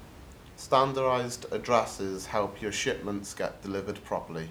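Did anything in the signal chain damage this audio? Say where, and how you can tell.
No, nothing in the signal chain damaged this audio.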